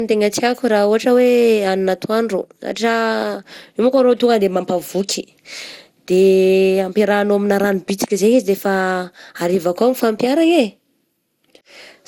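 Throughout the speech, the audio has the swirly, smeared and hollow quality of generation loss, with consonant attacks blurred and nothing present above 17.8 kHz. The likely cause is repeated lossy coding. The texture points to an MP2 chain at around 96 kbit/s, re-encoded perhaps seven times. Each pass quantised on a shifted frame grid, so noise accumulated beyond what a single encode at that rate would leave.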